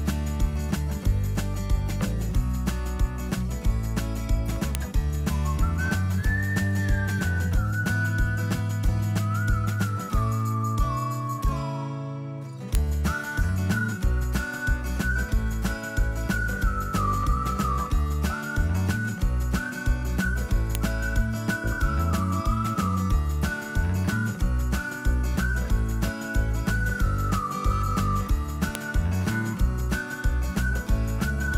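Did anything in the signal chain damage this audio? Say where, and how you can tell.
Yes. A file header was played as audio: 8-second WAV pieces were joined with their headers intact, so sharp clicks land at 4.75, 12.75, 20.75 and 28.75 s.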